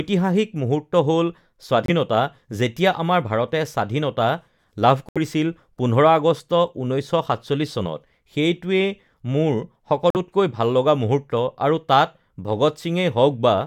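Speech, with three Bluetooth dropouts, likely from late packets being discarded: abrupt silences at 1.86–1.90 s after "মুহূৰ্ত হ'ল", 5.09–5.18 s after "ভাৰতে স্বাধীনতা লাভ", and 10.10–10.16 s. Each time the audio picks up further along, skipping what would have played.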